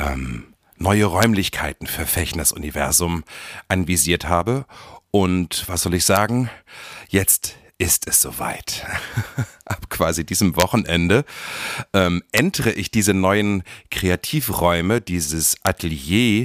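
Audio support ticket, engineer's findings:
Integer overflow in gain/summing stage: samples exceeding full scale wrap to opposite sign instead of saturating. Result on speech peaks: violent cracks, harsher than clipping, as waveform jumps across full range. Events at 1.23 s, 6.16 s after "und was soll ich", 10.60–10.62 s after "quasi diesem", 12.37 s before "ich diese neuen", and 15.67 s. Overdrive only about 0 to 2 dB, so even marginal peaks crack. Probable fix: saturating arithmetic or headroom before mix/gain.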